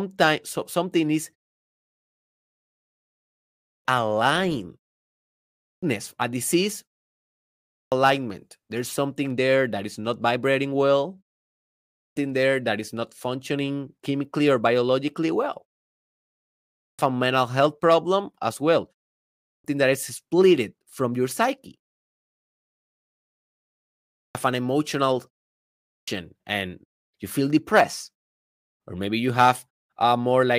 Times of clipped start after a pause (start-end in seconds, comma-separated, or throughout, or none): 3.47-3.85, 5.39-5.83, 7.49-7.92, 11.72-12.16, 16.58-16.99, 19.19-19.64, 23.94-24.35, 25.70-26.08